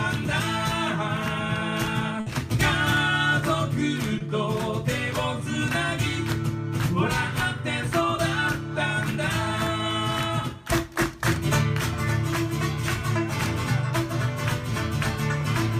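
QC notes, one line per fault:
2.20–2.27 s, burst of packet loss: about 60 ms of consecutive packets were lost or arrived too late; the receiver stretched the last sound and faded it, then resumed with that stretch missing.
4.18–4.21 s, short concealed packet loss: roughly 20 ms never reached the decoder; the gap was filled by extending the preceding sound, leaving a brief smear before it blends back.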